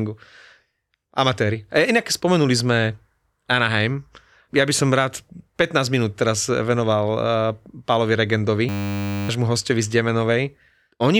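A system hang loop runs from 8.69 to 9.29 s. The playback side stalled while the sound hardware kept reading the same small ring buffer, so one 10 ms slice of speech repeats back to back. At that length the repetition fuses into a steady buzz at 100 Hz, a flat mechanical drone in place of the voice. When the speech resumes, roughly 0.7 s of it is simply gone, so the talk jumps forward.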